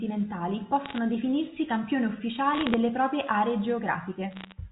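Speech over a G.711 telephone line carries bit errors on the digital phone line, with flipped bits corrupting single samples at roughly 0.5 to 0.7 percent. Bursts of sharp ticks and crackle land over otherwise steady speech at 0.86–0.98 s, 2.54–2.74 s and 4.31–4.52 s.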